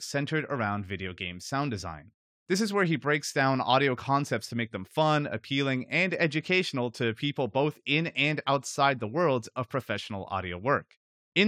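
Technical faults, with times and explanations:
No technical faults detected.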